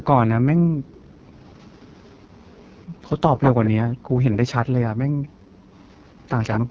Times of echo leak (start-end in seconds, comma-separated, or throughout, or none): 1.26-4.37, 5.24-6.60